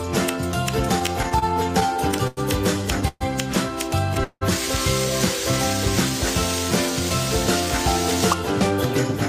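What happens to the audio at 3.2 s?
Delayed packets likely emptied the jitter buffer, causing a call audio freeze from 3.08 to 3.23 s: a fading buzz, 30 ms silence, then sound resuming intact.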